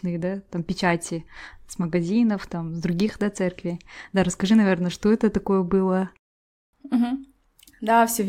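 No technical faults can be heard anywhere in the recording.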